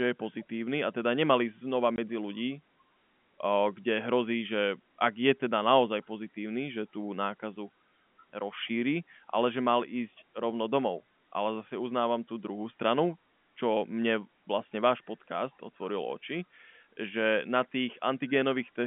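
At 1.96 s the speech drops out for 20 ms, a hole with hard edges: packet loss filled with silence. The gap's length fits a single lost 20 ms packet, with the receiver playing silence in its place, heard as a brief cut within the telephone-band G.711 audio.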